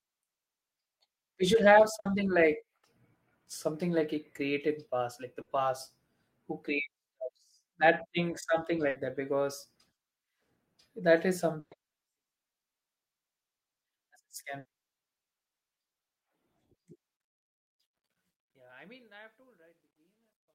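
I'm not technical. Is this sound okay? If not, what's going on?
No. There are six short bursts of packet loss, at 1.99, 2.77, 5.41, 8.89, 11.59 and 14.59 s. Each time a small piece of audio never arrived, and the player filled the hole by stretching out the last sound and letting it fade. You hear a brief buzz or hiss and then a skip. Most gaps are about 60 ms, and the one at 11.59 s is about 120 ms.

The closing fade-out begins around 17 s, and from 17.17 s to the end there is truncation distortion on a fade. The sound is stored with too few bits and no added noise to smooth it, so the quiet tail turns gritty and is worst from 18.82 s.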